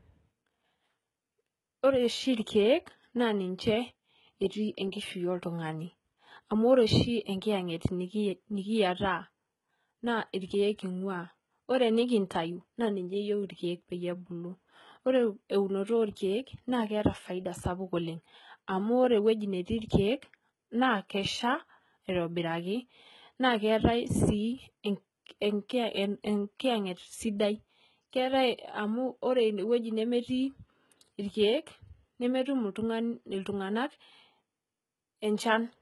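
Speech with heavy HE-AAC compression damage throughout, likely from a very low bitrate stream around 16 kbps. Unlike a plain low-pass, the treble stays bright but is rebuilt from copied lower bands, so s sounds turn gritty and metallic rather than dull.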